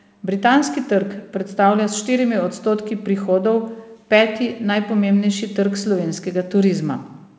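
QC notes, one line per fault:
No faults found; the call path is working normally, with the band stopping at 8 kHz, which fits a wideband codec such as G.722.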